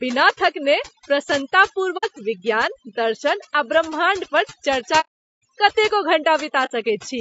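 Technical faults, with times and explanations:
throughout, overdone noise removal: The background drops and breaks up, dotted with twinkling specks. A noise reducer set too strong pulls single frequency bands down whenever they resemble the noise, and soft parts of the speech vanish with them.
throughout, low-delay AAC compression: The speech is rough and grainy. Noise fills the gaps between harmonics, and the top band sounds dulled and synthetic. This is likely AAC-ELD at a low bitrate, near 32 kbps. Its short frames resolve pitch harmonics poorly.
1.97–2.05, 5.00–5.41 and 6.65–6.72, AAC frame loss with muting: The sound fades out and back in, leaving soft-edged holes. The gaps last about 60 ms, 420 ms just after "आ ब्रह्माण्ड पर चर्चा", and 60 ms. Lost frames were zeroed, and the overlapping windows smoothed the edges.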